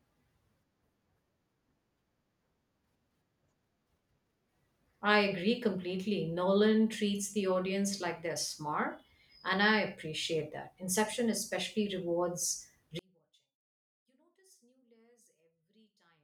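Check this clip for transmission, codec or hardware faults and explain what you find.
One fault is present, in the final stretch of the speech. One channel inverted, from 12.99 s to 16.24 s: the level collapses by about 38 dB and the speech all but disappears, leaving only a faint residue. The likely cause is one stereo channel flipped in polarity. When the two channels are summed to mono, everything they share cancels, so centred speech and low frequencies drop away, and only the small differences between the channels remain audible.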